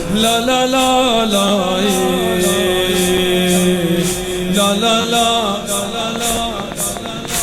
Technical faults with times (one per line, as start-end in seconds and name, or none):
1.48-1.50 repeated buffer
3.17 gap between stream segments
3.56 repeated buffer
5.01-5.05 repeated buffer
6.16-7.43 train of clicks
6.37 repeated buffer